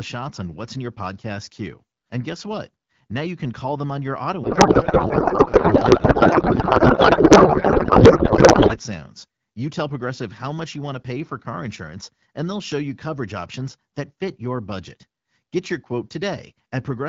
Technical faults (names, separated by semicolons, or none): codec payload misread